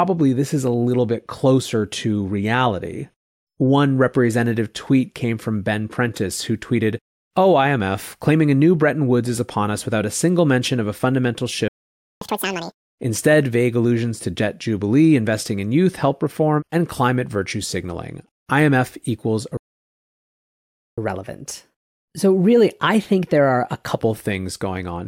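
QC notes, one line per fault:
11.68–12.21 s, playback stall: after "mention of a fundamental" the speech cuts to silence for about 0.53 s, likely the player starving of data.
12.21–12.75 s, catch-up at higher speed: the backlog plays at double speed, pitch rising roughly ten semitones, then settles back to normal.
19.57–20.98 s, playback stall: the speech drops out for about 1.4 s, likely a blocked or starved player, before resuming.
20.98–23.98 s, catch-up at higher speed: speech runs 1.1 times fast, pitch up about a semitone and a half, easing back at "things going on".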